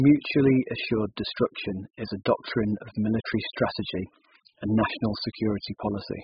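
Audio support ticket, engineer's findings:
Speech dull and smeared throughout, warbling on vowels, fizzy sibilants. Spectrogram: hard ceiling at 5 kHz, patchy holes and noise-filled bands below it. Likely AAC compression (AAC-LC), heavy quantisation consistent with a very low bitrate, around 8 kbps.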